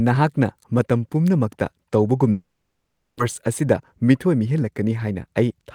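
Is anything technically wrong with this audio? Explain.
Yes, there are two faults. From 2.31 to 3.21 s the sound smears into a fading buzz, then about 0.75 s of near-silence follows, and roughly 0.6 s of speech is simply gone when it resumes. This is likely a long network dropout. On a spectrogram it appears as a blurred band decaying into a blank gap.

From 3.61 to 5.67 s a jitter buffer speed-up trims pitch-period slices to shed around a fifth of a second of backlog. The speech runs about 9% fast and sounds hurried. The spectrogram shows unchanged harmonic spacing but tighter syllable timing.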